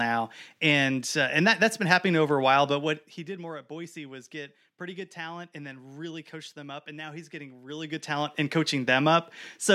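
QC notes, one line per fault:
2.68–3.4 s, zipper noise: after "happening over a while" the level drops roughly 15 dB in unsmoothed steps, around fifty a second, each jump clicking, until "more at".
7.7–8.4 s, zipper noise: after "and now he's getting" the level climbs roughly 15 dB in coarse steps, around fifty a second, so each gain jump ticks audibly.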